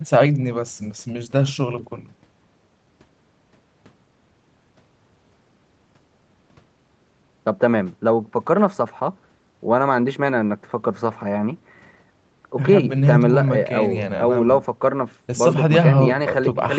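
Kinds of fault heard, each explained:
Nothing here counts as a fault: the speech has just been through ordinary call processing and a call codec, which is why nothing reaches above 8 kHz.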